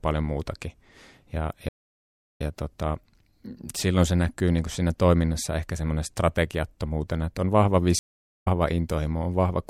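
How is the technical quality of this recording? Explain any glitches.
The speech is interrupted twice by a stream reconnect. At 1.69 to 2.41 s and again at 7.99 to 8.48 s, the connection dropped and the player restarted its decoder mid-stream. Each break leaves a gap of silence (687 ms, then 445 ms), and the audio fades back in roughly 0.4 s further along, skipping that stretch of speech.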